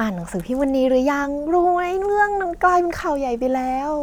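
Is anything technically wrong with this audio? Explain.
Yes. From 2.45 s to the end of the speech clip, playback slows by about 6.4% and pitch drops by 114 cents, just over a semitone, in a single sudden step that does not recover before the audio ends. This is likely a drift correction step, where clock-matching software changes the rate at once to manage its buffer. On a spectrogram, the harmonic lines step down together at 2.45 s. In the waveform, cycles stretch slightly from that point on.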